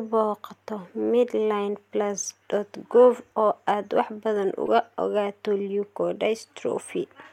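At 2.23 s the speech is broken by a short glitch, and just after "oo aad wax badan" a second one runs from 4.66 to 4.68 s. Both are damaged data in a compressed stream. Some of the encoded bytes at those points were corrupted or missing, so the decoder misreads the affected frames and loses sync until it finds the next valid frame header. Each lasts only a couple of hundredths of a second.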